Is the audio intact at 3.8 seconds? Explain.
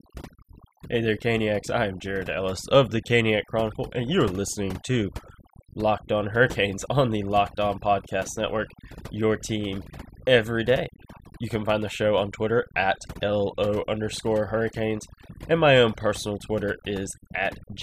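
No. At 3.8 seconds, as across the whole clip, the speech carries overdone noise removal: an over-aggressive noise reducer cuts individual frequency bands near its noise estimate, taking quiet speech detail with them. The background drops and breaks up into twinkling specks.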